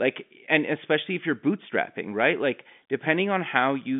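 No technical faults are audible.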